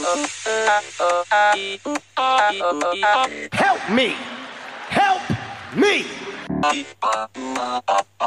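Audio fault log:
No fault to log.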